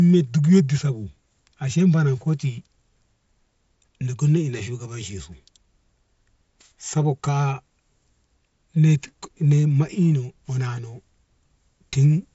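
No technical faults can be heard in this speech, so there is nothing to place in time order.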